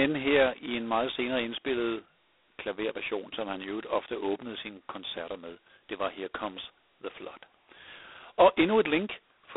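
The speech has passed through G.726 ADPCM coding at a very low rate, most likely 16 kbit/s, throughout. Nothing passes above 3.8 kHz, the band runs from 300 Hz to 3.6 kHz, and a harsh, rasping hiss rises and falls with the speech level.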